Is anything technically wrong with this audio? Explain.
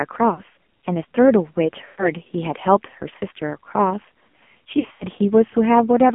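Yes. The whole clip has been through the AMR narrowband mobile codec, and it also has three bursts of lost AMR speech frames.

AMR narrowband mobile codec: This runs throughout. The speech sits in a phone band of roughly 200 Hz to 3.4 kHz. Nothing above 4 kHz survives. The codec rebuilds the voice from a vocal tract model fed by sparse pulses. Here the damage is heavy. The voice sounds buzzy and synthetic, which fits a low rate around 5.9 kbps.

Lost AMR speech frames: These happen at 0.34 to 0.42 s, 1.86 to 2.10 s and 4.80 to 5.05 s. Radio errors corrupted frames, so the decoder repeated the last good pitch and tract settings at falling gain. The first gap is 40 ms, which fits two 20 ms frames, and gives a brief dip or warble. The second covers 120 ms. There the sound smears and fades toward silence. The third loses 160 ms scattered across 200 ms, with runs up to 80 ms, so the voice dips and warbles.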